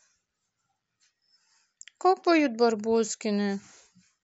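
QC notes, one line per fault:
Nothing to flag here, as no faults turned up anywhere in the speech.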